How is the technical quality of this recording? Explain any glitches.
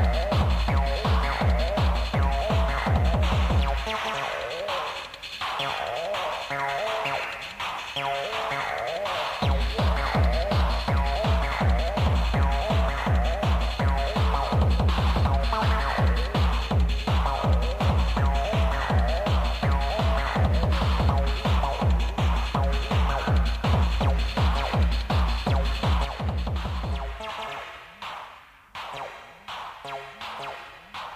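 There is one clear fault, near the end. From 26.05 s to the end of the recording, the level drops abruptly by about 6 dB and stays down. This is likely one channel dropping out: once the stereo signal is summed to mono, shared content loses half its contribution, and anything present only in the missing channel vanishes.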